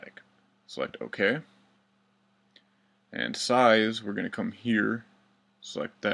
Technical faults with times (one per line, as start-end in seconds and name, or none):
none